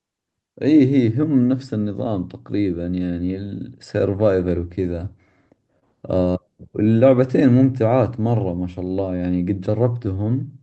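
Clock drift between sender and receiver runs through the whole clip. The sender's clock is slow, by roughly 3 percent. Audio reaches the receiver a little slower than it is played out. The jitter buffer keeps draining, so the receiver has to keep adjusting. The result is a faint unsteadiness in the timing of the speech. It never settles, because the mismatch never goes away.

Repeated timing corrections follow from that drift. They run from 0.78 s to 10.49 s. The receiver repeats short pieces to cover the gap. Every edit goes the same way, stretching, and they come at uneven spacing. Overall the speech plays at about 98 percent speed. Roughly a fifth of a second is added in total. Each edit is tiny. Together they give a slightly dragging, uneven tempo, with an odd small hiccup.

A short stall from a late packet falls between 5.79 s and 5.84 s. A packet missed its slot and the buffer ran dry. 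The receiver held the last sound for 26 ms until the packet arrived. Then it carried on from the same point, so nothing is lost. The delay grows by 26 ms here. It sounds like a brief held, slightly buzzy smear. All of this rides on the Opus call path, whose coding limits the audio to 8 kHz.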